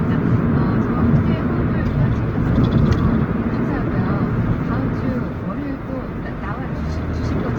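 From start to finish the sound carries Opus compression, likely from its CELT music mode at a low rate, which fits roughly 16 kbps. The damage is plainly audible: tonal parts turn grainy, rough and noisy because starved bands are refilled with folded or noise-like content. Compared with MP3, there is less swirling or watery gapping, and the top end stays open out to about 20 kHz rather than sounding muffled.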